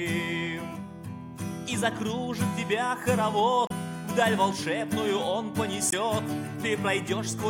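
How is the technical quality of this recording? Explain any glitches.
The recording has two brief glitches from damaged data in a compressed stream, at 3.67–3.72 s and 5.89–5.94 s. Corrupted bytes make the decoder misread those frames and resync, giving roughly 40 ms glitches that show on a spectrogram as short vertical broadband smears and in the waveform as abrupt, jagged discontinuities.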